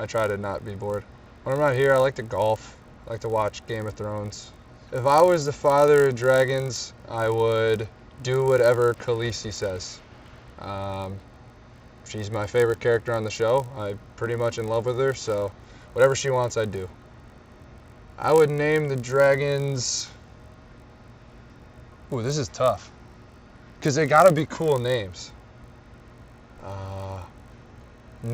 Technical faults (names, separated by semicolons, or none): resampler restarted on every block